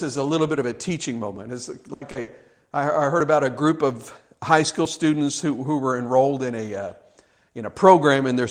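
Between 1.93 and 2.03 s the speech turns into a held, fading continuation of the preceding sound before jumping ahead. This is a burst of packet loss. About 80 ms of audio never arrived in time, so the receiver stretched the last sound and let it decay. When real packets resumed, the speech picked up later, with that stretch gone.

At 2.11 to 2.17 s a brief smear follows: a quick wobble where the sound blurs rather than breaks. This is short concealed packet loss. Roughly 40 ms went missing, and the decoder patched the hole by extending the last sound and then blending back into the true signal. The patch is short enough to soften detail without an obvious gap.

At 2.21 to 2.29 s a second burst of packet loss repeats the pattern of the first: a fading, held sound, then the speech resuming further on. This time about 60 ms is lost.

At 3.20 s and again at 4.85 s there is a small jump forward in the speech, with no silence at the join. 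Each is a dropped buffer, likely an overrun: the samples weren't collected before the hardware wrote over them, so a piece of about 20 ms vanished and the surrounding audio was spliced directly together.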